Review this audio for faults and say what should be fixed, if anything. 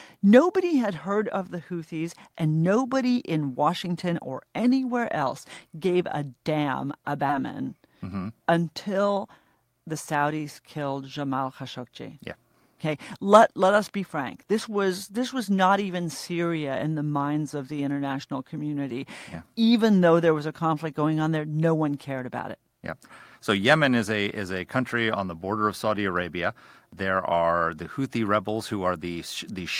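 At 7.29 to 7.31 s there is a skip ahead: about 0.4 s of the speech is simply gone, and playback jumps straight to later audio with no fill inserted. The jitter buffer likely discarded that stretch when it overflowed, since newer audio was already queued behind it. On the waveform the two sides butt together abruptly, and on a spectrogram the formant tracks and harmonics break off and restart mid-pattern with no silent gap. Prevention: size the jitter buffer to absorb the network's burst arrivals so it never has to drop queued audio to stay within limits.

From 7.77 to 9.13 s a jitter buffer speed-up follows, running at about 108% of normal speed at unchanged pitch, so the speech sounds hurried. The receiver was holding more delay than its target and trimmed it by cutting out short pitch-period-sized pieces repeatedly, roughly a tenth of a second in all. On a spectrogram, syllables and pauses look compressed in time while harmonic spacing stays the same. 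Prevention: let the buffer shed excess delay more gradually, or during silences, rather than in a dense run of cuts.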